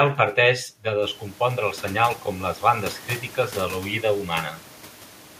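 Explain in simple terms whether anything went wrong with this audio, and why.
A loud pop hits at 4.32 to 4.34 s, just after "bandes crítiques de l'oïda". A brief electrical jolt, likely from a plug, switch, static or a driver hiccup, got added to the signal, giving one sharp snap over the speech, which continues underneath.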